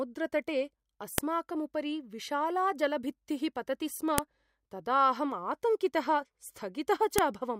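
Sharp, loud clicks land at 1.18 s, just before "उपरि विशाला जलभित्तिः पतति", then at 4.18 s and 7.18 s, exactly 3.0 s apart: a file header played as audio, where header bytes between joined pieces sound as samples. Unlike ordinary edit clicks, they ignore the speech and recur at a fixed chunk interval.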